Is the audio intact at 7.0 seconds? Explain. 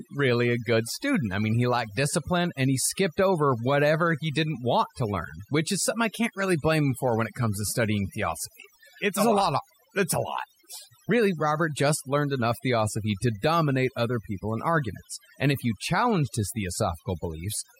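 No. Overdone noise removal affects the speech at 7.0 seconds, as it does throughout. Set far too strong, the reduction pulls individual frequency bands down or out whenever they sit near its noise estimate, taking quiet speech detail with them. The result is near-silent gaps sprinkled with twinkling specks.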